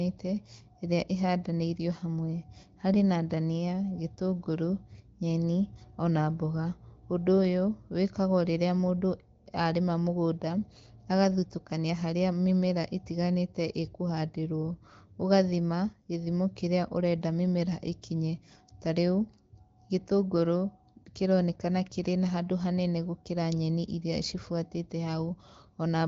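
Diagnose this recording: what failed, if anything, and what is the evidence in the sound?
Nothing has failed: the speech is band-limited with nothing above about 7.6 kHz and carries only light coding colour, which fits the AMR wideband (HD Voice) codec running at a 15.85 kbit/s mode as intended.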